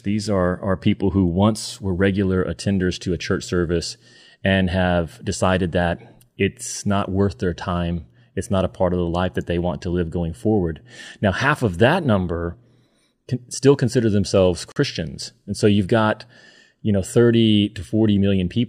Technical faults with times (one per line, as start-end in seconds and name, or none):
14.72-14.76 gap at a join of encoded pieces